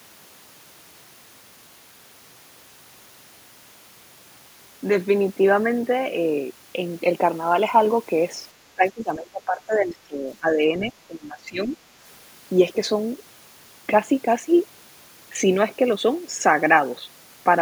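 Between 8.75 and 11.75 s the speech is suppressed in double talk, pulled down by as much as about 15 dB across roughly two seconds of that span. The likely cause is an echo canceller meeting simultaneous talk from both ends, failing to tell the near talker from loudspeaker echo, and attenuating everything. It sounds like the talker ducking away and returning. On a waveform the envelope visibly shrinks in patches, and a spectrogram shows those stretches fading across the band.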